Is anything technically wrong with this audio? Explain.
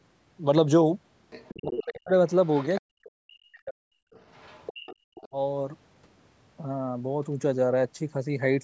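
Yes, this speech clip has echo-control problems.

Other side's voice leaking through, at 1.3–1.84, 2.29–2.81, 4.14–4.96 and 5.15–5.28 s: the echo canceller likely left loudspeaker sound in the microphone, so a second voice sits about 10 to 25 dB under the talker.

Speech suppressed in double talk, at 1.55–2.12, 2.83–3.96 and 5.29–5.35 s: the canceller likely mistook overlapping talk for echo and pulled everything down, so the talker's voice dips deeply or breaks up.

Background gated by the echo canceller, at 4.73–5.01 s: the canceller clamped the microphone while the loudspeaker played, so the room sound drops by about 26 dB, then returns.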